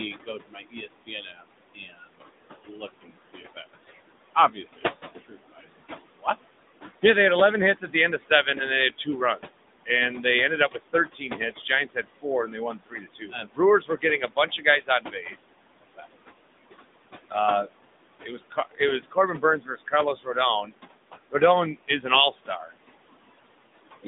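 From start to end, noise suppressor artifacts are present. Background noise drops by about 20 dB in the gaps between phrases and comes back under the speech. On a spectrogram, the noise floor fades in and out with the speech bursts.

For the whole clip, the AMR narrowband mobile codec limits the speech to roughly 200 Hz to 3.7 kHz, with nothing above 3.8 kHz. Its coarse vocal-tract model makes the speech sound plainly buzzy and synthetic, which fits a mid-rate mode around 10 kbps. The spectrogram shows a flat ceiling and smeared harmonics. The room noise, about 11 dB below the speech, turns into a swirling warble.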